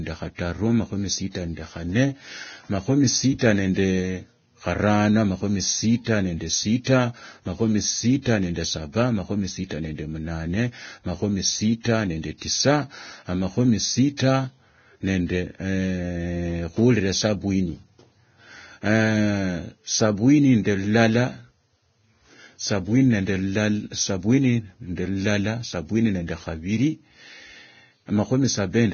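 From start to finish the speech sits under heavy codec damage that sounds like Vorbis compression, likely at a very low setting, something in the region of 18 kbps. Nothing comes through above about 6.6 kHz, so the top end is simply gone, and what treble is left has been quantised so coarsely that the fine detail turns into hiss of similar energy. You hear it as a grainy, fizzy edge, with roughened tone and smeared consonant attacks.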